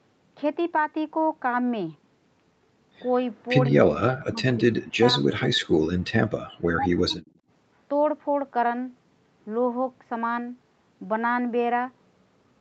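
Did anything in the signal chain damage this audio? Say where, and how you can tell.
Yes. The damage happens in the call processing stage, specifically in the echo canceller, which shows two kinds of fault. The content above 8 kHz is missing, which fits a call codec running at wideband.

Speech suppressed in double talk: the speech dips sharply from 4.19 to 5.26 s and again from 5.54 to 5.87 s, falling by about 40 dB at the deepest point. A milder dip of about 15 dB follows from 6.75 to 7.3 s. The most likely cause is the echo canceller misreading simultaneous talk as loudspeaker echo and attenuating the near talker along with it.

Echo leak: a delayed copy of the speech appears from 5.37 to 5.45 s at about 15 dB below the direct signal. A weaker copy, about 30 dB down, appears from 7.11 to 7.26 s. Both sit 162 ms behind the original. That fixed offset points to the round trip through a loudspeaker endpoint, where the echo canceller likely left residual echo unremoved and sent it back into the call.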